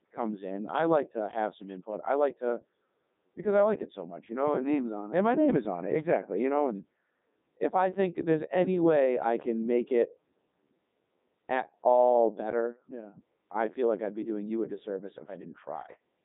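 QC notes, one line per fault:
Throughout: Codec 2 vocoder, heavy damage; speech resynthesised from pitch and envelope at a rate that fits 3.2 kbit/s, sounding robotic and buzzy, nothing above 3.8 kHz.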